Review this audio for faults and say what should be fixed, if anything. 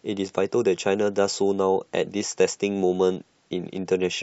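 Nothing stood out on listening, so there is nothing here that needs fixing.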